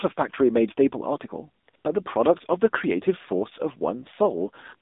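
Throughout, the speech sounds thin, buzzy and synthetic, confined to roughly 250 Hz to 3.7 kHz: AMR narrowband mobile codec damage, consistent with a low 7.4 kbps mode.

At 1.64–1.68 s, 1.70–1.74 s and 1.76–1.84 s, the real sound briefly drops to smooth, steady hiss. This is AMR comfort noise, synthesized by the receiver because no speech frames were sent.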